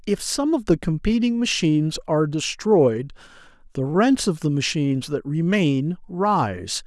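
Nothing goes wrong anywhere in this bit of speech, so there's no technical fault to point to.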